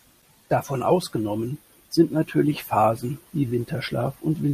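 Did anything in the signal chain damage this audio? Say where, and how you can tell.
No, nothing along the chain left a mark I can hear on this speech; it comes through steady and intact, with nothing at any stage worth pointing to.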